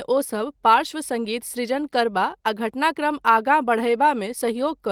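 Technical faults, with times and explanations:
No technical faults detected.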